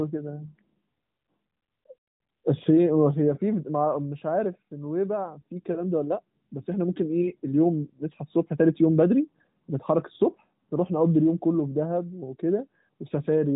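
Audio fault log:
The speech comes through an AMR narrowband mobile codec path with its band ending near 3.8 kHz, as that path requires, and no fault can be heard in the signal.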